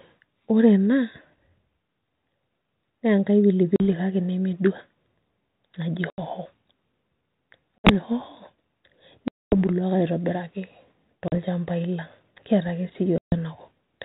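Packet loss on an ADPCM call cuts six hard-edged silent holes into the speech: at 3.76 s between "enkai pili" and "kake nemedua" (40 ms), at 6.1 s (80 ms), 7.79 s (60 ms), 9.28 s (240 ms), 11.28 s (40 ms), and 13.18 s just after "kiata ake" (140 ms). On a waveform each hole is a flat gap. On a spectrogram it is a vertical blank band below the 4 kHz ceiling of the light 32 kbit/s G.726 coding. Speech resumes with brief distortion while the decoder's predictor and step size resynchronise.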